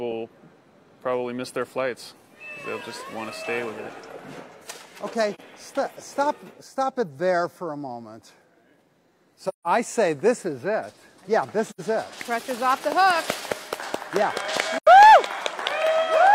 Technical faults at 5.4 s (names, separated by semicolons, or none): AAC frame loss with muting